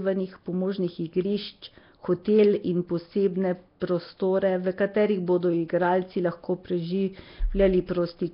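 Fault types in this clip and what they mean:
Nellymoser compression, throughout: the speech has a rough, hissy halo and a smeared, underwater quality, with heavy codec damage and nothing above 5.3 kHz. The likely cause is the old Flash microphone codec, whose coarse block coding at this level fits roughly 22 kbps.
Pre-echo, at 3.80 s: between "in posebne" and "prostore v katerih bodo", a hiss of about 16 ms comes just before a sharp attack, which sounds softened. The coding noise sized for the loud onset spills into the quiet moment before it within the same block.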